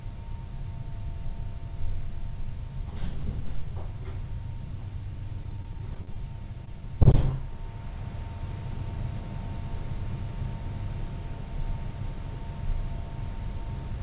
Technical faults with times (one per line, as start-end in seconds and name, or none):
5.44-6.16 repeated packet loss (robotic sound)
6.52-6.82 short concealed packet loss